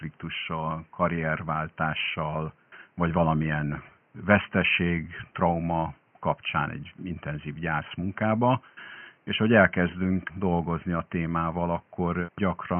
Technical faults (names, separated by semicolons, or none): none